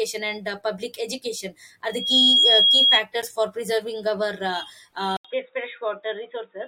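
From 1.88 to 3.03 s a loudspeaker feedback squeal rises at 3.3 kHz. It swells over roughly a third of a second to around 10 dB above the speech, unlike a steady interference tone that starts at full level.

At 5.17 s an 80 ms silence is followed by duller, slightly quieter speech with nothing above 3.8 kHz and a new faint hiss far below it. This is likely an input switched to a poorer device, not a filter, because of the gap and the changed noise floor.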